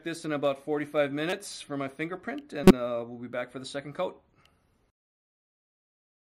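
A decoder played compressed frames whose bits had been flipped, a corrupt frame decoded, from 1.30 to 1.33 s and again from 2.64 to 2.71 s. Misread codes push energy to the wrong frequencies, so each stretch is heard as a short chirp or noisy blip lasting a few frames.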